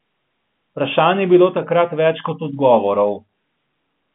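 No technical faults can be heard anywhere in the speech. It comes over a G.711 telephone line, so the sound is confined to a band of roughly 150 Hz to 3.5 kHz, with nothing above 3.8 kHz.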